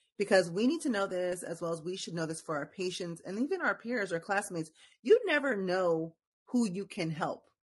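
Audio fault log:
Throughout: low-delay AAC compression. The speech has a rough, grainy texture, with noise filling the gaps between pitch harmonics and a thin, somewhat synthetic-sounding top band. This is likely a low-delay codec such as AAC-ELD at a modest rate, consistent with around 32 kbps. At that rate there are too few bits for the roughly 500 frequency lines coded each frame, so the damage stays plainly audible across the whole clip.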